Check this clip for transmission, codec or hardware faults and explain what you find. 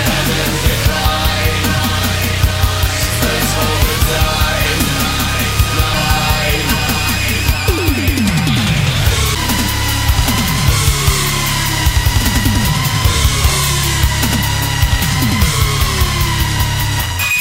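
One fault is present, a CD skip at 9.35 s. The laser pickup lost its place on the disc's spiral track and landed on a different turn, so the player muted briefly, for well under 10 ms, and resumed from another point in the recording. The result is a short tick or gap followed by an abrupt discontinuity, with the audio jumping forward or back by one or more turns of the disc.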